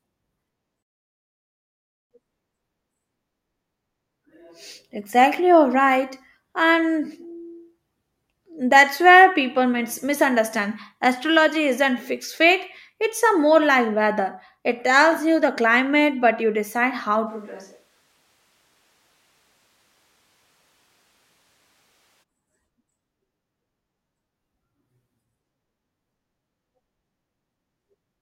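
A switch to a distant microphone runs from 17.28 to 22.22 s, right after "but you decide how". The speech abruptly turns roomy and hollow, thinner in bass, about 10 dB quieter and noisier, likely because the close microphone dropped out and a farther one stood in.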